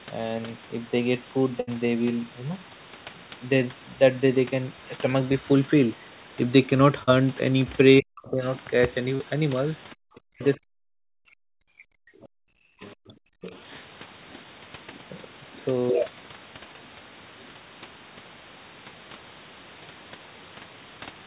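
Burst of packet loss at 1.60 to 1.70 s: roughly 80 ms of the stream arrived too late or not at all. The receiver stretched the last sound for about 71 ms while fading it, giving a held buzz or fading hiss before the speech jumps ahead with a piece missing.

Short concealed packet loss at 7.03 to 7.10 s and again at 9.15 to 9.22 s: about 40 ms went missing each time. The decoder bridged each hole by extrapolating the preceding sound and crossfading back, heard as a brief smear or wobble where a consonant can slip away.

Speech suppressed in double talk from 7.99 to 8.41 s, 10.08 to 12.04 s and 12.62 to 13.54 s: the talker's level dips sharply, by roughly 40 dB at worst. This is likely the echo canceller ducking the near voice while the far side was also talking.

Other side's voice leaking through at 8.28 to 8.49 s (about 25 dB below the speech), 9.90 to 10.45 s (about 30 dB below), 12.23 to 12.27 s (about 35 dB below) and 12.82 to 13.61 s (about 20 dB below): a faint second voice sits under the talker, likely loudspeaker echo that the canceller failed to remove.

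Background gated by the echo canceller at 12.14 to 12.50 s: while the loudspeaker was active, the canceller clamped the microphone by about 40 dB, so the room tone drops away for roughly 300 ms and returns once it releases. Throughout, the G.711 call path leaves nothing above 4 kHz.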